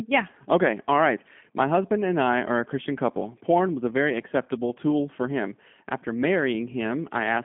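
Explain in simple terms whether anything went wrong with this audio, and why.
The whole recording, from start to finish, sounds muffled and a little rough and robotic, as if heard over an old phone line. Nothing sparkles or hisses at the top. That comes from the G.729 codec, a phone-call format that rebuilds the voice from a compact sound model instead of sending the real sound. It cuts everything above about 3.5 kHz and the deepest bass below 150 Hz, and its rebuilding leaves a plainly audible synthetic edge.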